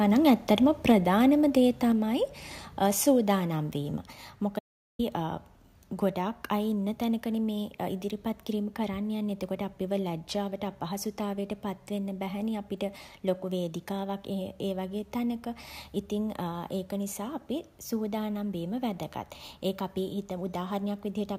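Twice in the opening second the microphone input gain was likely set too high, so the loudest moments drove the converter past full scale: microphone overload at 0.27 to 0.31 s, roughly 2 dB over, and again at 0.89 to 0.92 s, about 1 dB over. A small share of samples had their tops sheared flat, giving those peaks of speech a brief, harsh crackle.

Right after the second overload, the call software likely reacted by turning the microphone volume down in steps rather than once. The level drops at 0.92 s by about 2 dB, at 1.92 s by about 3 dB, at 2.94 s by about 2 dB and at 3.96 s by about 3 dB. That is roughly one step per second, around 10 dB in total. Each step is a sudden, audible drop in both the voice and the room behind it, so the speech gets quieter in a staircase over the first four seconds.

From 4.59 to 4.99 s the input signal was lost, likely through a momentary disconnection or mute, while recording continued and wrote silence. 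This is an audio dropout to silence lasting about 0.4 s. The speech cuts off abruptly, there is a gap of dead silence with no room tone at all, and the sound resumes mid-flow. Whatever was spoken in that gap is missing.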